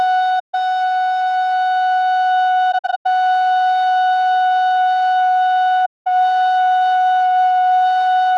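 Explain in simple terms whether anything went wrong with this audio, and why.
Pieces of the compressed stream went missing, and the decoder filled each gap with silence. This is AAC frame loss with muting. The music softly fades out and back in at 0.39–0.55 s, around 2.71–3.06 s as several short broken dropouts, and at 5.85–6.07 s.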